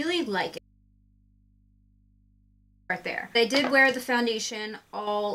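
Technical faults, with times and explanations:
Throughout: timecode bleed. A chirping warble sits far beneath the sound, roughly 35 dB down, as square-wave code switches between pitches near 1 kHz and 2 kHz. Its rhythm fits 29.97-frame code leaking from a neighbouring track or cable. A spectrogram shows faint, unbroken horizontal bands there with their harmonics.
0.58–2.90 s: audio dropout to a faint residue. The sound cuts out abruptly for 2.31 s, leaving only mains hum roughly 35 dB below the normal level, likely from an input left open after the wanted signal was lost. The waveform collapses to a thin band, and the spectrogram keeps only low hum lines.
4.50–5.07 s: one channel drops out. The level falls suddenly by 6 dB and recovers just as sharply, likely because one stereo channel vanished before the mono sum, halving the shared content. The waveform envelope steps down to half height, and the spectrogram dims evenly across all frequencies.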